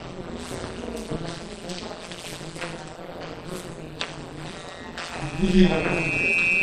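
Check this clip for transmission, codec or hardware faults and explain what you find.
Three faults stand out, two running the whole way through and one arriving near the end.

MP3 compression damage is plainly audible throughout: the sound has that watery, swirly quality as weak frequency lines flicker in and out. That likely comes from a low bitrate, somewhere around 48 kbps.

Overlap-add ripple also runs the full length. The frames were stitched back together with an overlap that doesn't sum to a steady gain, so the level swings by about 60 dB roughly 150 times a second, giving a metallic buzz with extra tones around each note.

A loudspeaker feedback squeal starts at 5.05 s and lasts to the end at 6.62 s. A mic is hearing its own loudspeaker and the loop gain tops one at 2.5 kHz, so that single tone swells over roughly a second and a half to sit around 5 dB above the sound.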